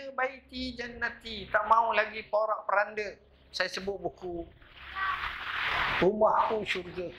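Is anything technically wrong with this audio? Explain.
No, nothing technically wrong turns up anywhere in this audio.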